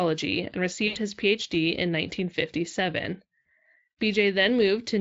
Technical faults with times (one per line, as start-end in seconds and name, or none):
0.87-0.97 VoIP packet loss concealed by the speech codec
3.44 VoIP packet loss concealed by the speech codec